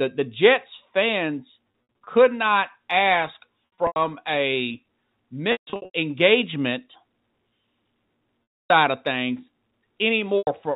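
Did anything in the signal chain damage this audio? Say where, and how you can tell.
Yes. Packet loss with pitch repetition occurs in the network stage at 2.04 s (before "not ask"), 3.87 s (after "not ask"), 5.52 s, 8.58 s (before "of things") and 10.38 s. Lost audio was patched by looping the last pitch cycle, producing buzzy held tones that fade on longer gaps, up to 150 ms near 5.52 s.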